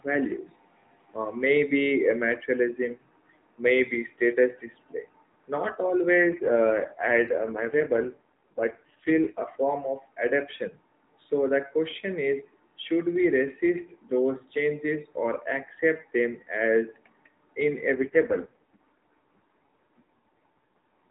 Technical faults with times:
6.18-9.45 AMR rate drop
17.94-21.09 AMR rate drop

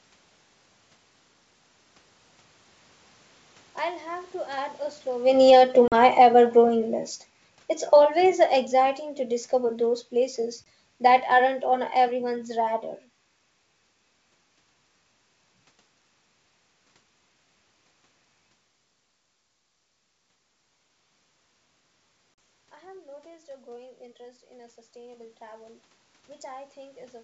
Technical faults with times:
5.27-10.44 automatic gain falling
5.88-5.94 packet loss on an ADPCM call
10.64 packet loss on an ADPCM call
22.34-22.38 packet loss on an ADPCM call

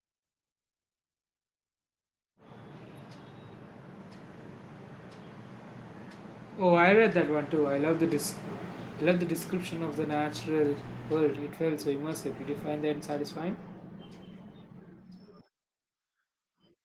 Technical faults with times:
none

